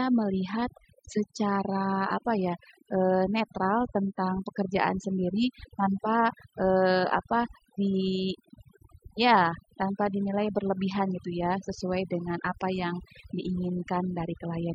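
Overdone noise removal runs through the whole clip. A noise reduction stage was pushed too hard on a noisy recording. It cuts individual frequency bands deep, or shuts them entirely, whenever their level sits near its noise estimate. Quiet parts of the speech fall under that threshold and are removed too. The background sinks and breaks apart into twinkling, warbling specks. These musical-noise artefacts flicker between and beneath the words from start to finish.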